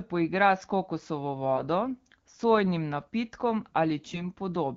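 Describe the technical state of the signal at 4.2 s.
At 4.2 s the speech turns hoarse, scratchy and gargly while keeping roughly its pitch and loudness. This is AMR bit errors, spanning about 3.98 to 4.26 s in the AMR-WB stream at 12.65 kbit/s. Around 7 percent of the less protected bits arrived flipped, yet the checksum on the critical bits passed, so the decoder used them. Its excitation pulses land in the wrong positions and the fine gain, pitch and spectral values drift.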